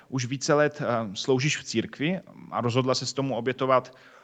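Nothing goes wrong in this speech clip, and the top end tapering off around 8 kHz is simply what a normal call path sounds like.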